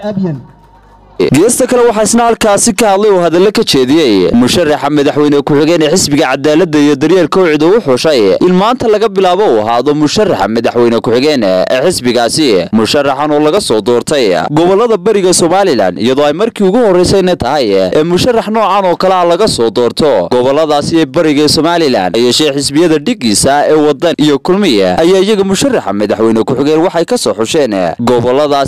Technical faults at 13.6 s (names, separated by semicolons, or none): block of digital silence